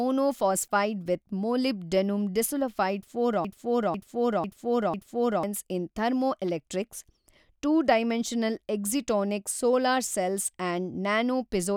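From 3.45 s to 5.43 s, right after "ಮೊಲಿಬ್ ಡೆನುಮ್ ಡಿಸುಲಫೈಡ್ ಫಾರ್", the speech falls into a broken-record loop. A half-second fragment (about 497 ms) plays four times back to back, identical each time. The likely cause is a stalled player or stream resending the last chunk it held. Unlike a stutter or echo, the repeats don't decay or vary, and the speech that belonged there is simply gone when it resumes at "ಇನ್ ಥರ್ಮೊಎಲೆಕ್ಟ್ರಿಕ್ಸ್".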